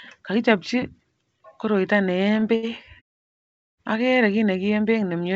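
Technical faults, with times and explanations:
2.40–2.44 s and 2.56–2.65 s, short stall from a late packet: the jitter buffer ran dry, so the receiver stretched the last sound by 18 ms, then 71 ms, before resuming.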